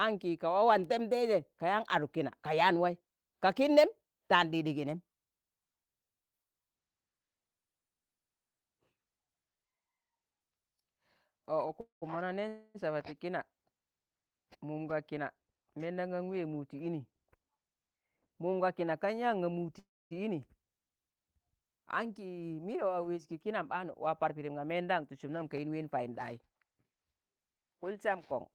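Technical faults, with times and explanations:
11.81–12.17 s, 12.48–12.77 s and 19.79–20.13 s, call audio freeze: each gap, likely from delayed packets draining the jitter buffer, is filled with a repeated buzz of the last sound (210, 262 and 322 ms). The first and third fade to silence, leaving flat waveform and blank spectrogram. Speech resumes intact but later.
23.65–26.91 s, jitter buffer speed-up: speech runs about 8% fast at unchanged pitch and sounds hurried as the receiver trims a built-up backlog, cutting about a third of a second in pieces of one or a few pitch periods. The spectrogram keeps steady harmonic spacing while syllables compress, and the waveform shows dropped cycles.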